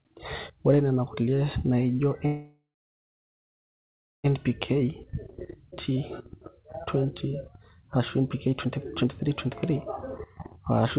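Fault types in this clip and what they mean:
Call audio freeze: Delayed packets likely emptied the jitter buffer after "ore nena kulie naijo", leaving a 2-second gap, mostly silent, from 2.26 s before speech resumes intact.
Skip ahead: A stretch of audio was dropped while later packets waited, so at about 5.71 s playback jumps forward, losing roughly half a second.
Jitter buffer speed-up: An overfull buffer was trimmed by cutting pitch periods, so speech runs about 12% fast from 6.6 to 9.7 s and 8% fast from 10.2 s.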